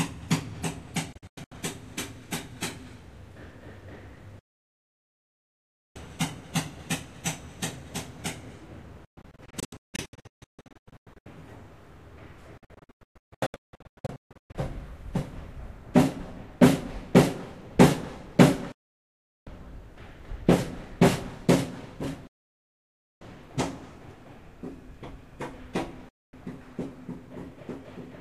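Digital broadcast dropouts at 1.13, 4.39, 9.05, 12.58, 18.72, 22.27 and 26.09 s: failed frames mute the receiver, leaving flat silent waveform gaps and blank spectrogram columns, some scattered into short holes.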